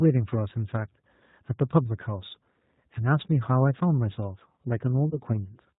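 A G.729 codec at 8 kbit/s carries the whole speech clip, rebuilding the voice from a vocal tract filter, a pitch predictor and a few pulses per frame, so everything above 4 kHz is missing and the speech sounds plainly rough, thin and synthetic. Near the end, VoIP packet loss concealed by the speech codec: about 20 ms of audio went missing, which fits a single lost packet, and the decoder extrapolated from its last pitch and filter, giving a brief fading smear from 5.10 to 5.17 s before the voice recovers.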